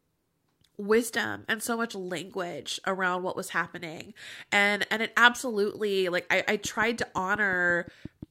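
From 6.65 s to 8.24 s, just after "absolutely like I I", a steady ticking rides over the speech: a train of clicks, about ten of them, evenly spaced at roughly 5.7 per second and each standing a few decibels above the voice, and they are heard in the gaps as well. The near-identical, regular pulses point to something injecting a spike at a fixed rate, likely electrical interference from nearby equipment or a faulty connection or power supply.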